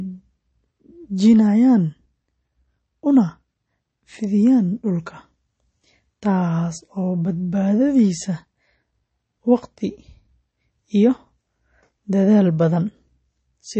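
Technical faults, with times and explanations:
Throughout, MP3 compression: the speech has nothing above about 8.3 kHz and a plainly audible watery, swirling texture, likely from MP3 encoding at a low bitrate, which fits roughly 32 kbps. Short of bits, the encoder cut the treble at a fixed point and dropped weak frequency lines that flicker on and off between frames. That flickering, not just the missing top end, separates it from a plain low-pass filter, which would sound dull but steady.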